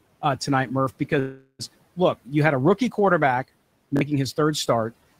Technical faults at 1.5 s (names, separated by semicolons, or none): call audio freeze